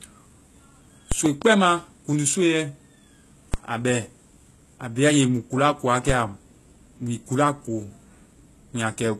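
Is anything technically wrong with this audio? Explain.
Yes. Throughout, the speech was likely passed through HE-AAC compression at a low bitrate, around 16 kbps. The treble is rebuilt from copied lower bands, so sibilants sound gritty and metallic, and nothing remains above 12.3 kHz.

At 1.12, 3.54 and 6.10 s, the waveform's zero line jumps in a DC step, then drains away through a 20 Hz high-pass. Each jump is heard as a low thump under unchanged speech.

Between 1.26 and 1.44 s, a loud pop appears, likely from a voltage spike such as a switch or static discharge. It comes as two sharp pops, roughly ten decibels above the speech, which continues underneath.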